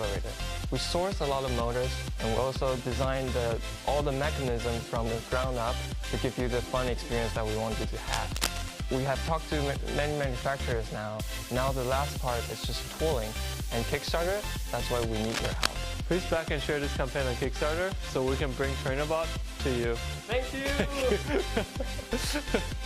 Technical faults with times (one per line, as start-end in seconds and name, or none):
8.12-8.82 cable scratch noise
14.90-15.68 cable scratch noise